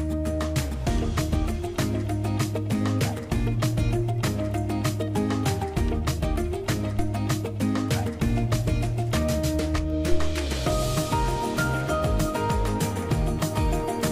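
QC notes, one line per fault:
6.99 to 7.15 s, phantom power thump: a deep, single low-frequency thump peaking at about -18 dBFS and dying away within 36 ms, from a supply switched on or off on the live input and its step passing through the coupling capacitors.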